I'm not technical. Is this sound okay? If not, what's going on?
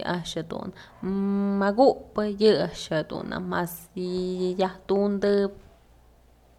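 Yes, this sound is okay, and nothing is going on that needs fixing.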